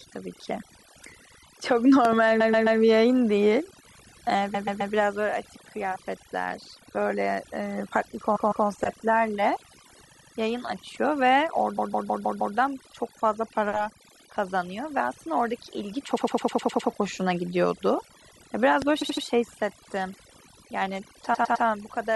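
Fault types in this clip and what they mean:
Overdone noise removal: Noise reduction pushed too hard shuts individual frequency bands whenever they sink toward the estimated noise floor. Quiet parts of the speech vanish along with the hiss, leaving the speech over near silence with twinkling specks for the whole clip. A spectrogram shows a black background dotted with isolated bright pixels and ragged, eaten-away edges around each syllable. The waveform sits at an almost flat line between phrases.
Loud pop: Sharp transients jump roughly 10 to 15 dB above the speech while the speech carries on underneath. There is a quick double pop between 2.05 and 2.15 s and a single pop at 18.82 s, most likely from a voltage step such as a plug, switch or static discharge. On the waveform each pop is a tall, narrow spike standing clear of the envelope. On a spectrogram it is a thin vertical line running from bass up to the top frequencies.
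Repeated frames: The decoder plays the same short stretch of compressed audio again, so the speech stutters and gains extra length. Repeats start at 2.39, 4.54, 8.35, 10.10, 11.77, 16.16, 19.01 and 21.33 s. Blocks run from 78 to 157 ms and recur two to seven times, adding up to almost 0.8 s at one spot. On a spectrogram identical patches tile side by side. The waveform shows the same shape copied in a row.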